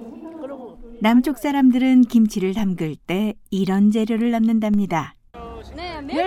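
A low thump lands at 2.59 s and again at 4.74 s, each a single knock under the audio while the sound itself carries on unchanged. Both are DC steps: the waveform's zero line suddenly jumps by about −23 dBFS, as when a converter recalibrates or an offset input is switched in. The offset doesn't hold but drains away gradually, as a 2 Hz high-pass would pull it back to zero.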